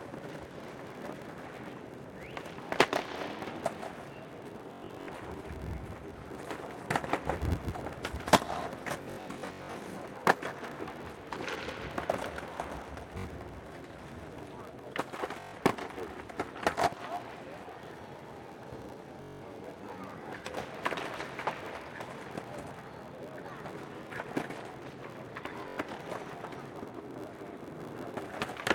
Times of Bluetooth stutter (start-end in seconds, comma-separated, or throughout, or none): 4.73-5.09, 9.02-9.76, 13.18-13.26, 15.40-15.55, 19.22-19.43, 25.68-25.78